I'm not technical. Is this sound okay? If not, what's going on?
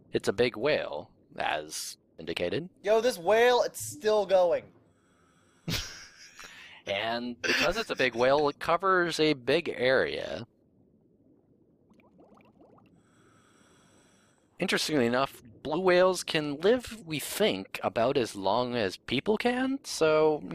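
No. From about 4.70 s to 7.98 s there is a channel delay causing comb filtering. One side of the stereo sound arrives roughly 10 milliseconds later than the other, and when the two are combined, parts of the sound cancel each other out at evenly spaced pitches, starting near 40 Hz. The result is a hollow, phasey quality, as if heard through a tube, that disappears once the section ends.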